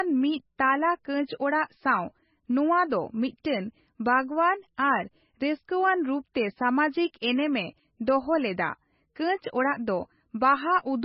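Throughout the speech, the sound is dull and watery, with nothing above 5.6 kHz and weak detail flickering in and out between frames, likely from heavy MP3 compression at a very low bitrate, around 18 kbps. A plain low-pass filter would remove treble without that swirling.

At 3.44 s, just after "ᱱᱚᱣᱟ ᱫᱚ", a pre-echo appears: about 10 ms of hiss runs ahead of a sharp onset. The codec spread noise meant for the loud attack across the quiet gap before it, so the hiss comes before the attack instead of trailing it like reverb.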